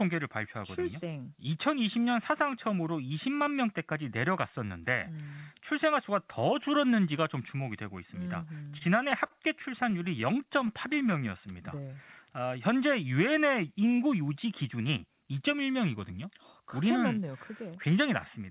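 From 8.56 to 11.10 s, packets kept arriving late and the jitter buffer repeatedly ran dry, producing repeated stalls (stutter). The receiver stretched the last sound across eighteen brief gaps, the longest 40 ms, adding about 200 ms in all. Nothing is lost, but the speech catches and drags.

Overlapping the end of that stretch, from 10.50 to 11.96 s, the buffer was still rebuilding its reserve, so a jitter buffer slow-down repeated single pitch periods to add 125 ms. Speech plays at 92% speed at unchanged pitch, with sounds drawn out.

From 13.98 to 15.44 s the opposite happened: too much audio had piled up in the buffer, so a jitter buffer speed-up trimmed short pitch-period pieces, removing roughly 150 ms. Speech runs at 108% speed at the same pitch and sounds hurried.

Throughout, the sound stops at 4 kHz, which fits a G.711 narrowband call codec.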